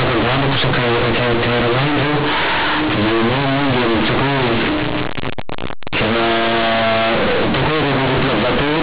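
From start to end, companded audio read as linear: A-law bytes are played as plain 8-bit samples without expansion, so the speech becomes harsh, buzzy distortion with loud noise in pauses.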